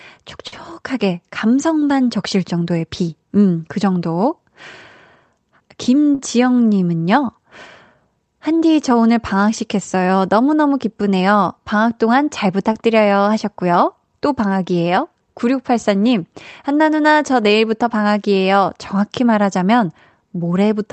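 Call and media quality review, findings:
Short stall from a late packet at 0.47–0.53 s and 6.15–6.19 s: sound held too long, slight buzz or dip. Jitter buffer ran dry; receiver stretched the last sound by 48 ms and 36 ms respectively, then resumed in place. Nothing lost, delay grows each time.

Jitter buffer speed-up, 5.78–6.12 s: audio hurried at unchanged pitch, about 109% speed. Excess buffered audio trimmed by cutting short pitch-period pieces repeatedly, around 40 ms in total. Follows directly into the 6.15 s stall.

Short concealed packet loss, 12.73–12.75 s: brief smear or wobble. About 20 ms never reached the decoder; the receiver extrapolated the preceding sound and cross-faded back into real audio. Call codec sound fits Opus, with high-frequency cutoff pointing to 8 kHz bandwidth.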